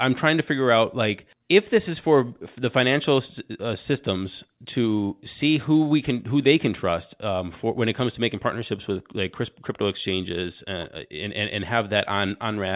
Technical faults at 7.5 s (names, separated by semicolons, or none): none